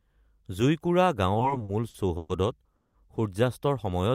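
Repeated stalls (stutter) run from 1.34 to 2.30 s. Packets reached the receiver late or slower than playback consumed them, so its jitter buffer emptied nine separate times. At each gap the receiver stretched the last sound to cover the wait, adding about 290 ms of filler in total, with the longest gap reaching 120 ms. That filler is roughly a third of this stretch. Nothing is lost, but the sound drags and hiccups unevenly.

A call audio freeze follows from 2.76 to 2.95 s. For about 180 ms the sound stops moving forward. It holds as a continued tail that fades, and the last 100 ms of that is silence. Playback then resumes exactly where it halted, so nothing is missing, but everything after this point sits about 180 ms later than before. The likely cause is packets held up in transit long enough to drain the jitter buffer completely.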